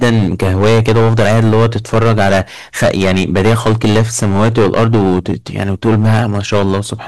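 Hard clipping runs through the whole speech clip: the level was pushed about 16 dB past what the stage could pass, so roughly 15% of samples sit flat at the ceiling. Every loud syllable turns to harsh fuzz, with abrupt buzzy edges rather than the rounded warmth of soft saturation.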